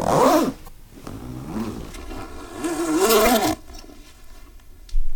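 At 0.64 to 0.69 s, and again at 3.25 to 3.27 s, there is damaged data in a compressed stream. Corrupt bytes make the decoder lose frame sync and hunt for the next header. Each spot gives a brief glitch.

From 1.92 s to the end, channel delay causes comb filtering. One channel lags by about 3 ms and mixes with the other. Shared content cancels at evenly spaced frequencies, the first near 150 Hz. The sound turns hollow and phasey.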